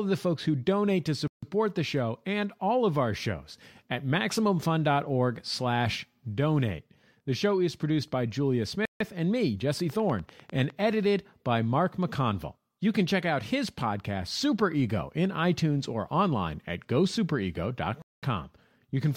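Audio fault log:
1.27–1.43 s, 8.85–9.00 s and 18.02–18.23 s: Bluetooth stall. The sound drops to silence for 0.15 s after "folks who donate to", again just before "and me", then for 0.21 s, and resumes where it left off. This is likely the headphone buffer running dry while delayed packets were resent.
9.80–10.81 s: train of clicks. Right after "and me", around ten evenly spaced clicks arrive at about 10 per second, peaking about 5 dB above the speech and ticking over it. This is likely a repeating pulse from nearby interference or a faulty connection or power supply.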